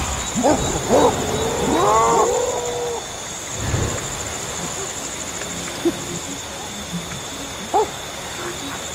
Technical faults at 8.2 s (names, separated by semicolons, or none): none